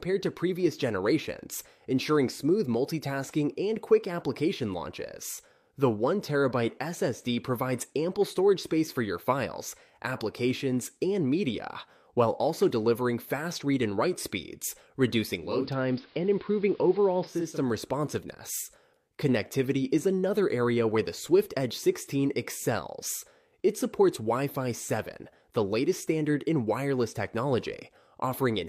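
At 15.31–17.66 s, digital radio blending to analogue AM (475 ms cross-fade) brings faint hiss; the spectrogram loses its top end, waveform level unchanged.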